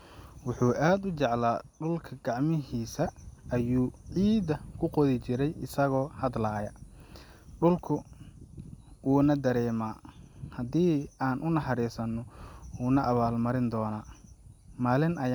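No technical faults can be heard anywhere in the recording; the signal stays steady and intact throughout the speech.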